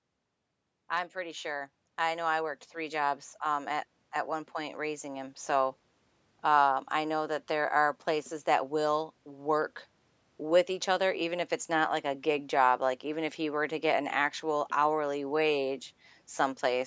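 From 0.74 s to 5.45 s the level climbs steadily by about 12 dB, an automatic gain rising fault: the gain control judged the input too quiet and kept turning itself up, so the speech and the background noise swell together rather than the talker getting louder. On a waveform the envelope widens like a ramp over those seconds. On a spectrogram every band brightens evenly, including the noise floor between phrases, up to the 8 kHz ceiling left by the call's microphone processing.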